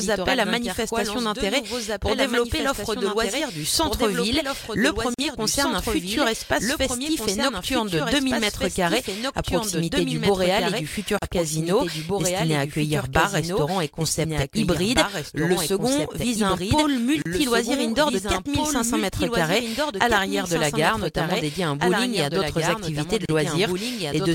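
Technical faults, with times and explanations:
Throughout: doubled audio track. The audio was likely captured a second time through a slower path, so one full-band copy, about 5 dB quieter, follows about two seconds behind the original. It carries no decay or room colour, so it sounds like a clean, late replay laid over the sound rather than an echo.
5.14 s, 11.19 s, 17.22 s and 23.25 s: gap at a join of encoded pieces. The sound was encoded in separate pieces, one every 6 s, and joined without trimming. Each piece kept its encoder start delay and end-frame padding, so the continuous sound drops out for 44 ms at the first join and 34 ms at the others. Each silence has smeared edges, and the sound resumes exactly where it stopped.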